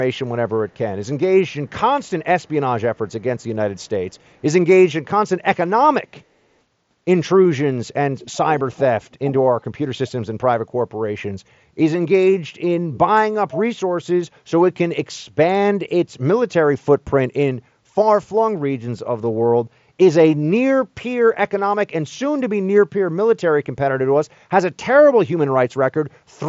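An echo leak recurs at 0.69–1.06, 1.48–1.71, 2.41–2.49, 3.08–3.45, 3.76–4.41, 8.19–8.37, 8.73–9.31 and 12.93–12.98 s. A copy of the speech returns 337 ms late, likely because a far-end echo canceller let loudspeaker pickup through. The early scraps are faint, around 40 dB down. They grow louder near 8–9 s, reaching roughly 15 dB below the speech. On a spectrogram, the echo looks like ghost harmonics trailing each phrase, all capped under the codec's 7.7 kHz limit. On the waveform, small offset bursts sit in the gaps.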